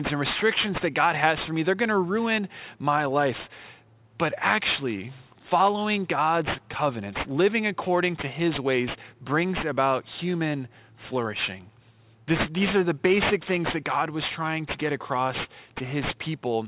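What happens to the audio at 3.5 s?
At 3.5 s the speech sounds gritty and metallic, as it does throughout: aliasing from downsampling without filtering folds content above 4 kHz back down, only about 10 dB below the speech.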